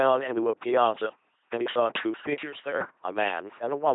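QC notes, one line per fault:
throughout: LPC-10 vocoder. Speech sounds buzzy and robotic, since each moment is rebuilt from pulses or noise. Nothing above 3.8 kHz, which fits a 2.4 kbit/s coder.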